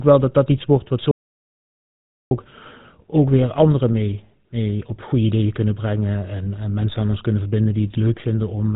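From start to finish the speech carries GSM full-rate codec damage, a buzzy, gravelly roughness with nothing above 4 kHz, unlike plain narrowband filtering, which stays smooth. That fits the 13 kbps full-rate coder.

From 1.11 to 2.31 s there is an audio dropout to silence, likely a lost input. The gap is dead silence with no room tone, so it is a true cut rather than a quiet pause.

At 3.41 to 3.45 s, GSM bit errors produce a brief squawking pop, about 34 ms long. Corrupted decoder values distorted the sound, unlike a dropout, which simply goes silent.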